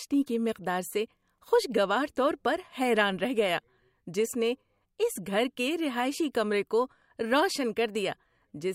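No technical faults can be heard anywhere in the speech recording. There is nothing in it that calls for a time marker or an account of something going wrong.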